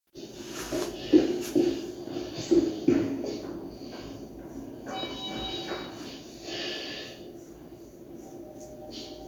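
Nothing stood out on listening to these sounds.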